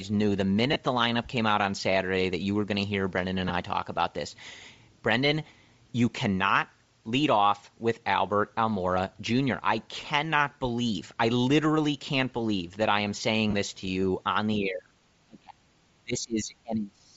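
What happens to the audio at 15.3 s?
From 15.27 to 15.62 s the speech is pulled down hard, by around 35 dB at its deepest, and thins and breaks up over roughly four tenths of a second. This is speech suppressed in double talk, likely from an echo canceller that heard the far side talking at the same moment and could not separate the near talker from loudspeaker echo. Unlike a packet dropout, the level ducks and frays rather than stopping in a clean digital gap with edge clicks.

Underneath this, and through the whole clip, runs Bluetooth LC3 compression, a transform codec that leaves the upper spectrum grainy and breathy. Here it has zeroed much of that band and filled it with noise. The plainly audible damage fits a low bitrate of about 32 kbps with 7.5 ms frames. It differs from simple band-limiting because the top end is not merely dull. It hisses with synthetic texture that shifts from frame to frame.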